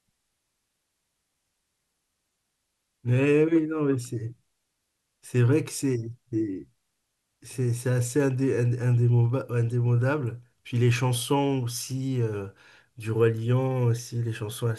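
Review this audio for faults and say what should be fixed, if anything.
Nothing needs fixing; no faults turn up in this recording.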